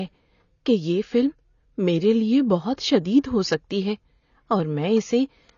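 Throughout, the speech sounds dull, with nothing above 6.9 kHz and a warbling, fizzy texture on sibilants. Heavy AAC compression is the likely cause, fitting a low bitrate near 24 kbps.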